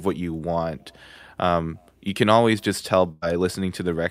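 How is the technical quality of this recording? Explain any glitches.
The recording has one glitch, a burst of packet loss from 3.11 to 3.36 s. Several packets went missing, so the receiver held the last sound for about 100 ms while fading it, then jumped ahead. Another 100 ms of speech is simply gone. Unlike a plain dropout, there is no silent gap, only a smeared, dying tail and then a jump.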